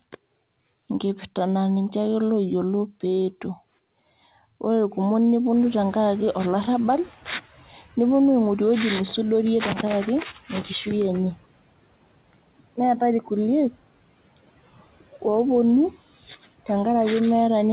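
Around 5.5 s the room noise jumps by about 24 dB, and the noise suppressor is slow to catch up. From 5.55 to 7.13 s its noise estimate lags, so the noise comes through with less reduction at first, then sinks by about 9 dB over 1.58 s. On a spectrogram the broadband floor between speech brightens abruptly and then fades, and in the waveform the pauses visibly fill with noise before thinning out. All content stops at 4 kHz, which fits a narrowband G.711 call path.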